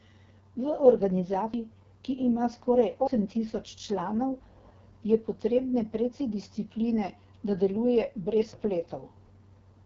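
From the start to the end the speech carries the sound of the AMR wideband (HD Voice) codec at its lowest rate, which fits about 6.6 kbit/s. At that rate the pulse-driven vocal tract model has too few bits to follow the voice closely, so the speech comes out rough and raspy, with heavy damage throughout. The band above 6.4 kHz is filled with shaped noise, and nothing is heard above 7.5 kHz.

At 1.54 s the speech jumps forward, with no gap of silence, straight into "ki ima skoraj". About a third of a second of audio is missing. This is likely a dropped buffer (overrun): the program did not read the input in time, the hardware overwrote those samples, and the audio on either side of the loss was butted together.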